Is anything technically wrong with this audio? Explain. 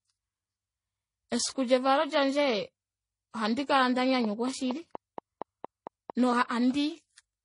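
Yes, there are two faults in this speech clip.

Throughout, the audio shows transcoding between lossy codecs. It was most likely encoded at a very low rate with a spectral-band-replication codec such as HE-AAC and then re-encoded as MP3. Nothing survives above 10.6 kHz. Smeared, warbly top end from the first codec sits alongside the MP3's own swirly pre-echo and metallic ringing. A single lossy pass would show only one of these kinds of artefact.

From 4.25 to 6.34 s there is a train of clicks: around ten sharp, alike pulses at a steady 4.3 per second, likely from interference or a faltering interface. They stand roughly 10 dB above the speech and tick on through pauses too. Their even spacing and matching shape set them apart from random crackle or isolated dropouts.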